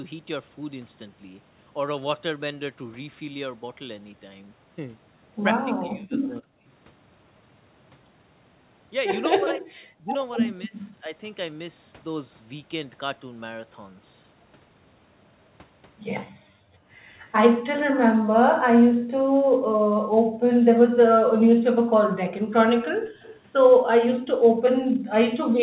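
From 5.66 to 6.7 s and again from 9.39 to 11.12 s, speech suppressed in double talk: with both sides talking, the echo canceller likely mistook the talker for echo and pulled the voice down by up to about 40 dB, so it dips and drops out in pieces. At 16.32 to 16.46 s the background is gated by the echo canceller: while the loudspeaker plays, the canceller clamps the microphone, and the room sound briefly vanishes by about 40 dB before returning. The same double-talk suppression returns from 16.74 to 18.99 s as a short dip. From 18.97 to 20.42 s the background gating recurs for about one and a half seconds of dropped room tone. From 20.77 to 25.24 s the voice is again cut back in scattered fragments by double-talk suppression. Within that stretch, at 23.21 to 23.4 s, an echo leak appears: residual loudspeaker pickup likely escaped cancellation, leaving a faint copy about 25 dB down, trailing by 258 ms. 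From 24.52 to 24.92 s the room sound is gated once more, ducking by about 40 dB. All of this sits within a narrow band that stops at 4 kHz, consistent with the 64 kbps G.711 mu-law codec.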